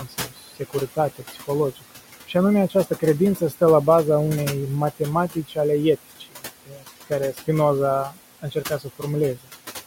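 Noise suppressor artifacts run through the whole clip. The suppressor pulls the room noise, which sits about 13 dB under the speech, down by about 16 dB between phrases and lets it back up under them.

Speech cut by the noise suppressor occurs at 0.00–1.92 s, 2.69–3.03 s, 3.36–3.61 s, 5.33–5.57 s, 6.19–7.48 s and 8.10–9.03 s. Quiet speech was mistaken for noise and turned down by about 13 to 18 dB, so short pieces, the longest in the first stretch, sound swallowed.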